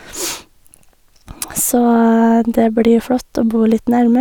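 No technical faults are audible anywhere in this speech recording; nothing to flag.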